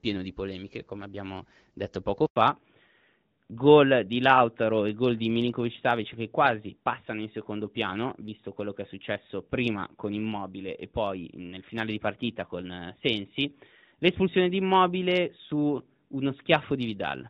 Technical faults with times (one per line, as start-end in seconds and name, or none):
2.26-2.36 handover gap
2.36-17.30 fallback to narrowband